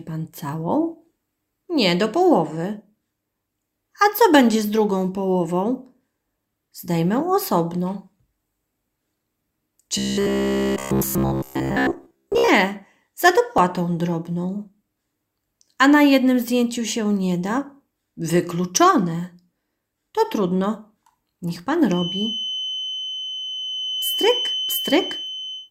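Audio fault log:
9.98–12.48 s, robotic sound from repeated short buffers: a rigid metallic buzz near 66.8 Hz, likely from most of the audio being replaced by repeats of one short buffer of about 15 ms.
13.58 s, 17.58 s, 19.57 s, 21.56 s, overlap between stream segments: tiny clicks or skips on a 2-second segment grid, where a few milliseconds of overlapping audio are cut and the waveform jumps.
21.85–25.71 s, feedback whistle: a thin 3 kHz whistle about 10 dB below the sound, likely a speaker-to-microphone loop held just short of runaway feedback.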